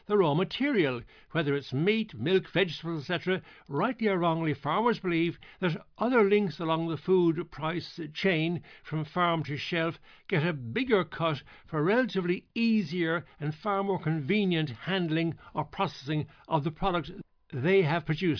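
No technical faults can be heard in the recording.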